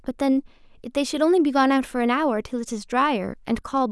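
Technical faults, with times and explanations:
No technical faults can be heard in this speech recording, and the signal stays steady and continuous throughout.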